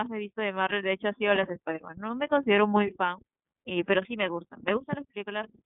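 Throughout the speech, the iLBC codec is plainly audible. Nothing passes above about 3.8 kHz, and each frame's excitation is coded on its own, giving a rough, slightly synthetic grain that fits 30 ms frames at around 13.33 kbps, rather than the clean dullness of simple band-limiting.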